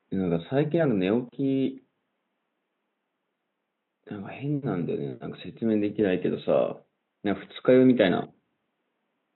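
A speech recording with no technical faults, carrying only the ordinary background noise of the room, which sits about 54 dB below the speech.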